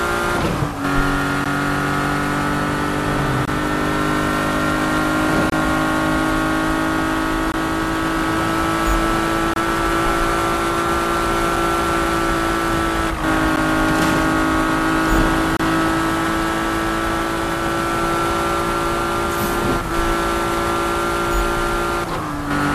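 A gap between stream segments recurs every 2 seconds: mismatched segment timestamps leave holes the player fills with silence, heard as hard-edged dropouts of about 5 to 30 ms at 1.44, 3.45–3.48, 5.50–5.52, 7.52, 9.54–9.56, 11.56, 13.56 and 15.57–15.60 s.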